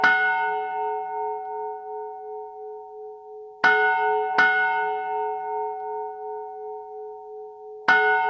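Throughout, wrong sample rate playback stretches everything. It runs at half speed, a full octave low, which fits 32 kHz audio played at 16 kHz.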